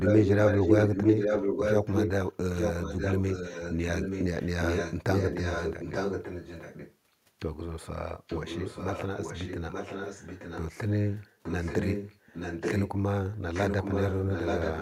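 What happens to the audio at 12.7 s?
At 12.7 s you're in an echo leak running 11.11 to 12.92 s: a copy of the speech returns about 0.88 s late, only slightly quieter, likely a far-end echo canceller letting loudspeaker pickup through.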